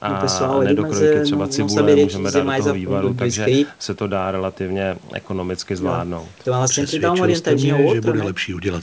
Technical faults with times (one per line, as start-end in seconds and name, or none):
none